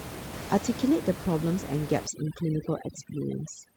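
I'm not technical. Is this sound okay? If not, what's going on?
No. From about 2.07 seconds to the end, overdone noise removal sets in: a cleanup tool pushes too hard, so the background drops and breaks up into twinkly specks. A plain dropout would give clean silence without that sparkle.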